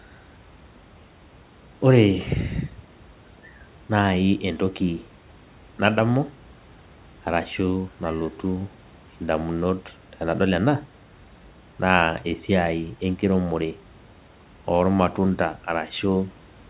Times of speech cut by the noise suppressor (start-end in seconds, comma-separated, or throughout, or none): none